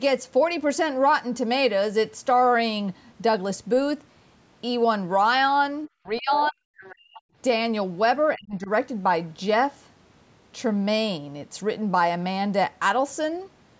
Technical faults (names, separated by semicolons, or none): speech suppressed in double talk; other side's voice leaking through; background gated by the echo canceller